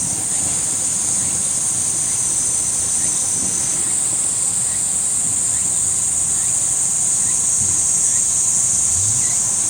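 Nothing stood out on listening to this clip.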